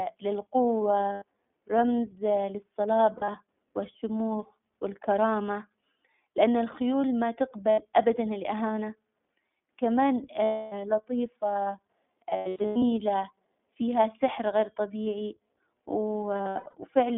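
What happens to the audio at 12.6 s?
At 12.6 s the speech falls inside a burst of lost iLBC frames running from 12.30 to 12.84 s. About 380 ms of audio went missing, spread across roughly half a second, with the longest unbroken gap around a tenth of a second. The decoder fills each hole by repeating the last pitch cycle blended with noise, so the gaps come out as a held, faintly buzzy, breathy vowel sound. Because each 20 ms frame is coded without relying on the one before, the speech snaps back to clarity almost as soon as packets arrive again.

That whole stretch also carries the iLBC codec itself, which is plainly audible. The sound is confined to a telephone band of roughly 200 Hz to 3.5 kHz, so everything above is gone. The excitation is coded frame by frame at a rate that fits iLBC's 15.2 kbps mode, which gives the speech a slightly rough, synthetic edge while it stays clear.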